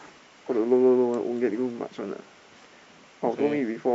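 Nothing in this speech recording stands out as a technical fault at any point, so there's no problem to trace.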